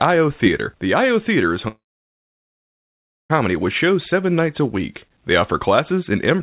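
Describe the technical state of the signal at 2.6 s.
At 2.6 s you're right in the middle of a gap that runs from about 1.68 to 3.32 s, most likely a long network dropout. Around 1.6 s of audio never arrived. The receiver stretched the last sound into a brief fading buzz or hiss, roughly a tenth of a second, then fell to near silence. So at 2.6 s there's essentially nothing. When sound returns, the missing stretch is just gone, and it's still capped at 4 kHz like the rest of this narrowband call.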